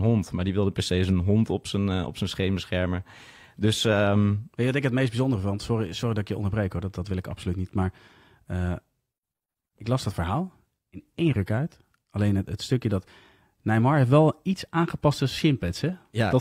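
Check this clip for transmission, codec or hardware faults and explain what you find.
No transmission, codec or hardware faults can be heard in the speech recording; the signal stays intact and consistent throughout.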